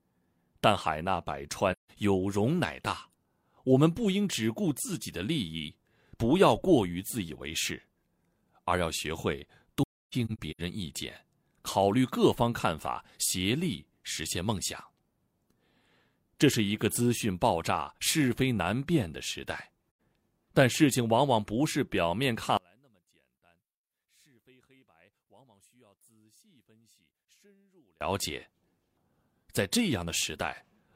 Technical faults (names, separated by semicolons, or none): AAC frame loss with muting; one channel inverted